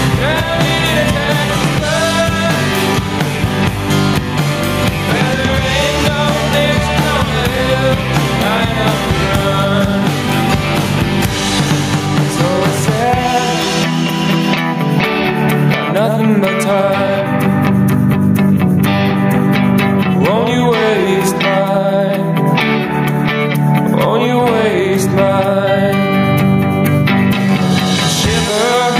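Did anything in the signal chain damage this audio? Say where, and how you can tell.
Yes, there is gain pumping throughout. The gain swings around 15 dB, squashing loud and soft parts closer in level, likely from excessive input gain driving a fast limiter.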